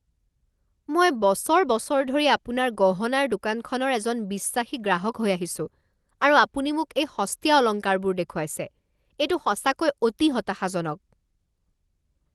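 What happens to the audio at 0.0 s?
Nothing goes wrong at 0.0 s; the speech starts intact there, with only the ordinary band-limited character of a call path.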